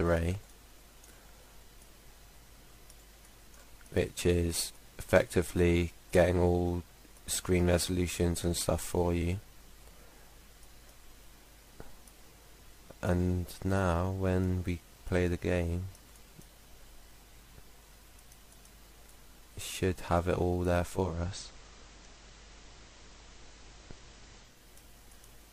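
At 20.92 s there's a digital radio blending to analogue moment: the receiver loses the digital stream and cross-fades over about 284 ms to the FM broadcast. The level shifts by about 2 dB, hiss sits roughly 30 dB down, and it blends back at 24.67 s.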